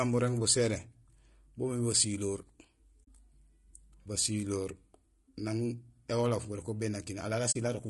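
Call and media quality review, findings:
Low-delay AAC compression, whole clip: speech sounds rough and grainy, with noise filling the gaps between harmonics and a top end that sounds thin and a bit synthetic. Likely AAC-ELD, the call-style low-delay codec, at a rate that fits around 32 kbps. Its short frames don't resolve pitch harmonics well, and at that rate the damage is plainly audible.

AAC frame loss with muting, 3.03 to 3.08 s: a soft-edged gap of about 40 ms where the sound fades out and back in. Lost frames were zeroed by the decoder, and the overlapping windows smoothed the edges.

AAC frame loss with muting, 7.51 to 7.56 s: the same thing, a roughly 40 ms faded dropout, about two frames' worth.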